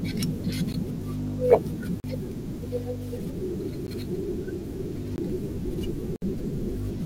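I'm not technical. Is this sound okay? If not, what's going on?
No, not quite. The speech drops out five times in a block of digital silence, where the sound abruptly goes silent and snaps back. This happens at 0.73 s, 2.00 to 2.04 s, 3.87 s, 5.16 to 5.18 s, and 6.16 to 6.22 s. The gaps run from about 15 to 60 milliseconds. The short ones sound like ticks, and the longer ones sound like tiny holes. This likely means the playback or recording software fell behind and didn't deliver audio in time.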